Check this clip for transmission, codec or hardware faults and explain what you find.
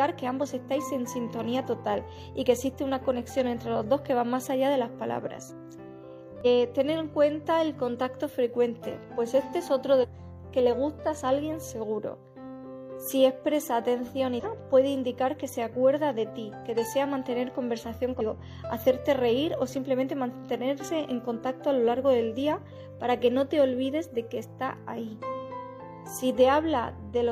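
Four short glitches at 6.41–6.47 s, 9.99–10.05 s, 14.40–14.45 s and 18.16–18.22 s come from damaged data in a compressed stream. Corrupted bytes there make the decoder misread the frames, lose sync and hunt for the next valid header, producing each brief glitch.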